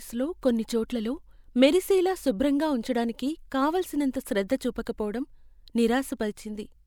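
No technical faults are audible anywhere in the recording.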